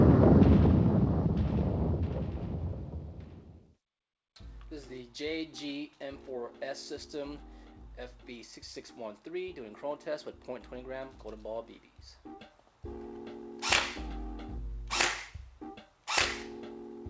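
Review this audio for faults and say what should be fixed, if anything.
No faults found; nothing to fix.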